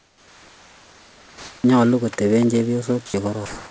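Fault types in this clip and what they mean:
Sound dropped by the voice detector: From 3.06 to 3.14 s, a short stretch of the speech gives way to a flat, steady hiss for about 80 ms. Roughly 30 ms of real sound is missing inside that gap. The likely cause is a sender's voice detector treating part of the sound as background and pausing transmission. The receiver then filled the hole with comfort noise until the detector triggered again.
Comfort noise in place of the background: From 3.46 s to the end of the clip, about 250 ms, the room background turns into an even, textureless noise. The real background sits about 26 dB below the loud parts. The substitute is only about 1 dB different in level, so the change shows mainly as a loss of detail rather than a drop in volume. This likely comes from discontinuous transmission, with the receiver generating synthetic noise during the pause. Like the rest of the call audio, it holds nothing above 8 kHz.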